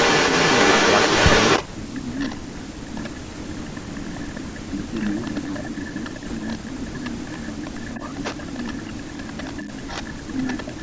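A speech recording with two faults, both likely from a loudspeaker-side echo canceller. Echo leak: a copy of the speech trailing by about 293 ms is heard from 0.0 to 3.77 s, about 5 dB louder than the direct speech. It returns from 4.48 to 10.82 s about 15 dB down, likely residual far-end pickup the canceller failed to remove. Speech suppressed in double talk: the talker's level drops from 1.59 to 3.12 s (around 25 dB at worst, roughly a second in total), from 3.76 to 9.67 s (around 20 dB, roughly 5 s affected), and from 10.26 s to the end (around 15 dB). This is likely the canceller ducking near-end speech while echo is present. The call microphone path's 8 kHz upper limit is audible as normal bandwidth.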